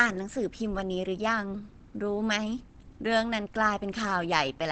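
Throughout the speech the sound is plainly muffled and hoarse, likely from Opus compression in its speech mode at a low rate, which fits about 16 kbps. On a spectrogram, energy stops in a flat ceiling at 8.7 kHz for the whole clip.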